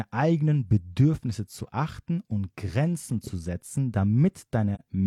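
At 4.75 s, near the end of the speech, the sound fades out and back in around a short gap lasting until about 4.81 s. This is AAC frame loss with muting. Roughly 43 ms of coded audio went missing, which fits one lost AAC frame, and the decoder filled it with a zeroed spectrum. The overlapping transform windows taper the edges into a soft dip rather than an abrupt cut. A spectrogram shows a narrow vertical band of reduced energy across all frequencies, and the waveform envelope narrows smoothly into a brief dip and back.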